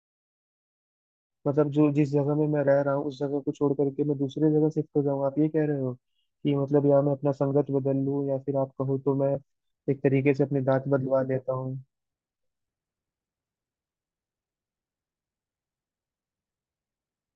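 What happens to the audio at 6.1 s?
At 6.1 s the speech runs on cleanly, with no dropout, click or other fault.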